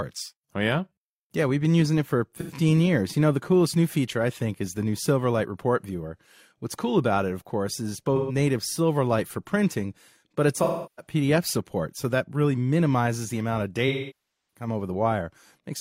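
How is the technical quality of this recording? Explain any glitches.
The recording is marred by four dropouts from AAC frame loss with concealment, at 2.38–2.52 s, 8.16–8.35 s, 10.63–11.13 s and 13.88–14.67 s. Compressed audio frames went missing, and the decoder rebuilt each gap from the last good spectrum. The brief patches sound smeared and noisy. The longer 0.34 s and 0.64 s losses thin and fade before the sound returns.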